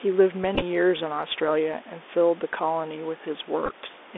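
Throughout, the speech carries Bluetooth CVSD headset codec damage: the band stops near 3.6 kHz, sibilants turn scratchy, and a granular hiss sits under the speech, along with faint room noise about 24 dB down. From 0.55 to 0.62 s, and again from 3.66 to 3.71 s, Bluetooth headset packets are repeated: lost packets are replaced by the previous packet's bits in short scattered runs, heard as brief buzzy ticks.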